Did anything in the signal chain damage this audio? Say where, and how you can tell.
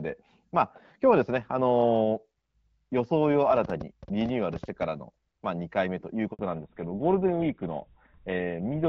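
Yes. A train of clicks runs from 3.57 to 4.83 s: around fifteen sharp, similar-shaped ticks at an uneven spacing averaging about 9.6 per second, peaking roughly 5 dB above the speech and audible in the pauses too. Near-identical pulse shapes at an irregular rate point away from the speech itself and toward the analogue wiring or interface stage, likely interference from nearby equipment or a faulty connection or power supply injecting the pulses.

A handover gap sits at 6.33 to 6.39 s, a 60 ms dropout where the voice fades out within a few tens of milliseconds and goes silent before resuming. This is a network-stage fault: the call was being moved between networks, no speech frames arrived during the switch, and whatever was said in that window is simply gone.

A fallback to narrowband follows immediately, from 6.39 s to the end. Before that point the speech carries the airy top end of HD Voice, lightly coloured by AMR-WB at a setting consistent with 12.65 kbit/s. 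Afterwards nothing remains above 4 kHz and the voice turns duller and grittier, which points to the call dropping to an older narrowband codec such as GSM full rate after the handover.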